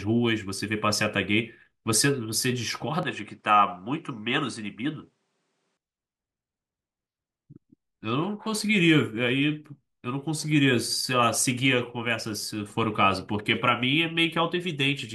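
From 3.03 to 5.77 s the speech loses everything above 10.5 kHz, drops about 5 dB and gains faint new background noise, so the input likely switched to a poorer device.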